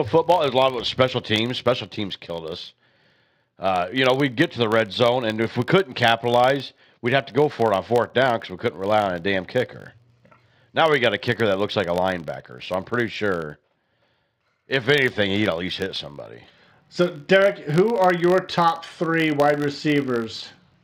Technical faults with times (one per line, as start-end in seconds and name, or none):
0.00-20.84 filter restarted on every block